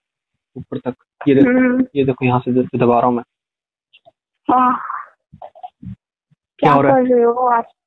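No technical faults can be heard anywhere in this audio. There is nothing in the sound that calls for a fault description.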